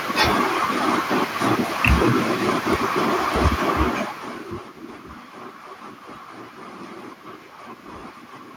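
Lost LE Audio frames at 5.66 s: a roughly 10 ms stretch of the speech briefly loses its clarity. This fits a single dropped Bluetooth LE Audio frame. The LC3 decoder filled the hole by repeating the previous frame's spectrum with randomised signs. Because the loss is so short, there is no fade toward silence. Instead, any tonal part of the voice turns into a brief noisy smear before normal audio resumes. The room noise underneath, and the level change from the talker moving around three and a half seconds in, are part of the recording itself.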